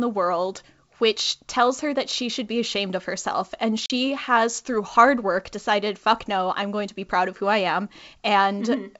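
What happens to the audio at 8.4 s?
At 8.4 s the speech runs on intact, with no fault, just the bandwidth and faint upper-band hiss of its 64 kbit/s G.722 wideband telephone coding.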